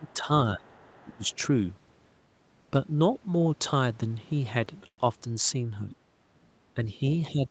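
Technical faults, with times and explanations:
0.00–1.28 s, speech suppressed in double talk: the talker's level sags by up to about 15 dB, and roughly half a second of it is pulled down in patches. This is likely an echo canceller that could not separate the talker from loudspeaker echo while both sides spoke, so it attenuated everything.
0.03–1.38 s, other side's voice leaking through: a faint second voice sits underneath, about 30 dB below the talker. The far end's playback was likely picked up by the microphone and not fully cancelled, leaving this residue mixed in.
4.87–5.00 s, call audio freeze: the sound stretches into a brief fading fill, then about 70 ms of silence, 104 ms in all, before continuing exactly where it stopped. Late packets likely drained the jitter buffer, so the gap was inserted and nothing was lost.
5.90–5.96 s, other side's voice leaking through: a 60 ms scrap of another voice surfaces at about 25 dB below the talker. 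Incomplete echo cancellation likely let this piece of loudspeaker playback slip through the microphone.
6.75–7.51 s, speech suppressed in double talk: the talker dips again, by up to about 10 dB, through to the end of the audio. The echo canceller likely misjudged overlapping talk as echo and turned the microphone signal down.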